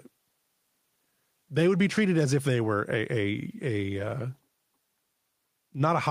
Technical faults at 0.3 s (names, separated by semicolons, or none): none